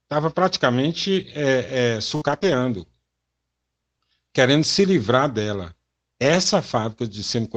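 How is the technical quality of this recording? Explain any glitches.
The speech has audible network-loss damage clustered around 2.2 to 2.6 s, plus two later rough patches, heard over Opus call coding that tops out near 8 kHz, consistent with about 24 kbps.

From 2.15 to 2.23 s, a burst of packet loss: about 60 ms went missing, and the receiver stretched the last sound into a fading tail before the audio jumps forward.

Lost packets rebuilt from error correction appear at 2.23 to 2.37 s, 2.43 to 2.53 s, 5.16 to 5.18 s just after "querendo se", and 6.24 to 6.38 s. The decoder substituted low-bitrate backup copies, so there is no gap, only a rougher, noisier texture.

Between 2.39 and 2.56 s, a short concealed packet loss: about 20 ms never arrived and was patched by extrapolation, leaving a brief smear that adds roughly 15 ms of timing shift.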